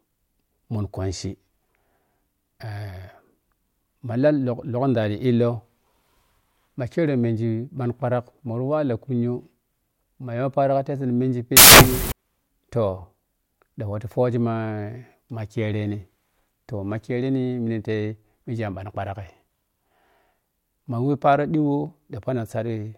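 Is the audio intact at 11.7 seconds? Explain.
No. From 11.57 to 12.12 s the samples are built from the wrong bytes: reading the bytes wrongly makes low bits dominate, producing loud, harsh broadband noise in place of the speech.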